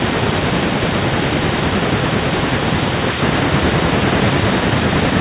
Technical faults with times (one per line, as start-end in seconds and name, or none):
none